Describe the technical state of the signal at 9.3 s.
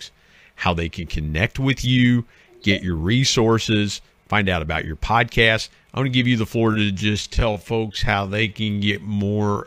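Time-stretched section, 6.67 s after "to give you the" to the end: speech slows to 0.61 speed at unchanged pitch and drags, likely from software repeating fragments.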